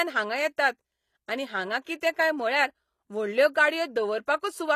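Throughout, s sounds turn gritty and lispy, likely from HE-AAC compression near 24 kbps rebuilding treble from copied lower bands, unlike the dullness of a lowpass.

From 1.84 to 1.87 s, between "आनी हांगां" and "कितें काय", pre-echo puts a short hiss before an attack as block-spread codec noise leaks ahead, softening it rather than clicking.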